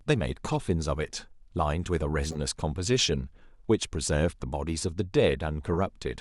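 At 0.52 to 0.55 s, a corrupt frame decoded gives a short chirp. A couple of compressed frames arrived with flipped bits, and the decoder played them anyway. Misread gains and codes put energy at the wrong frequencies. At 2.25 to 2.38 s, a few frames are damaged. The noise burst is louder, peaking around -15 dBFS. At 5.73 to 5.78 s, a brief squeak follows, near -20 dBFS.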